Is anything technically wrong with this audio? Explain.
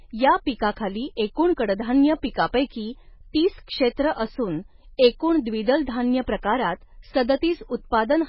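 Yes, there's heavy damage running through the whole speech clip, and it's likely MP3 compression. Nothing comes through above about 5.5 kHz, where the encoder has simply chopped off the treble to save bits, which fits a very low bitrate of around 16 kbps. Below that it's throwing away weak frequency lines that flicker on and off between frames, so the sound goes watery and swirly, s sounds turn metallic and chirpy, and consonant attacks smear.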